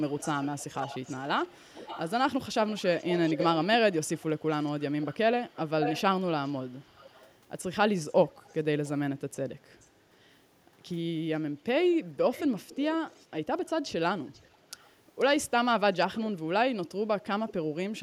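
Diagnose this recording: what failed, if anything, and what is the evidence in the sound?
Call processing: echo leak, a faint speech copy lagging 467 to 487 ms at 0.1–7.35, 8.1–8.9, 9.71–9.86, 11.63–13.7, 14.33–15.25, 16.17–16.27 and 17.49–17.53 s. The cause is likely incomplete echo cancellation; the discrete lag, unlike reverb's smeared decay, identifies it.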